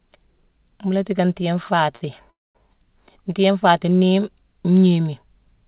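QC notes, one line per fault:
1.66–1.70 s and 1.96–2.03 s: short stall from a late packet, both just after "la tiicka ntiiyé". A packet came late and the jitter buffer emptied. The receiver held the last sound, for 16 ms and then 51 ms, so it drags and buzzes briefly. Nothing is lost.
2.31–2.57 s: call audio freeze. The audio stops and is padded for 240 ms. About 220 ms of that is silence after a brief fading buzz. It then resumes where it left off. Packets were likely held up in transit, so the jitter buffer ran dry.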